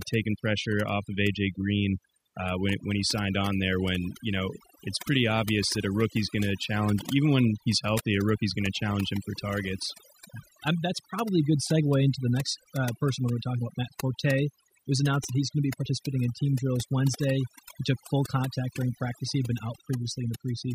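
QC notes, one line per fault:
Throughout, overdone noise removal: aggressive suppression gates individual frequency bands near the noise floor, leaving near-silent gaps with twinkling specks; spectrogram shows speckled holes.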